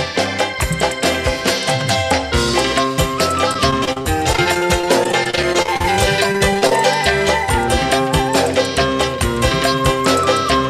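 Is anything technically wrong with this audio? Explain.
Yes, there are two kinds of fault.

Repeated packet loss (robotic sound) occurs from 3.53 to 5.85 s and again from 6.24 to 6.72 s. Audio kept arriving late or not at all, and each hole was filled by stretching the last sound. The first stretch has 24 gaps of up to 31 ms, about 17% of it patched. The second has 8 gaps, about 26%. The result is choppy with pieces missing, and it goes on for a while. A single glitch would not.

A repeated buffer occurs at 3.84 s, inside the first choppy stretch. When new audio came too late, the device played its last block once more. The block is about 11 ms, which fits a 512-sample buffer, and roughly 10 ms of audio was lost. Unlike the packet-loss smearing, this is one identical piece played twice with a hard join, so it sounds like a brief click or buzz.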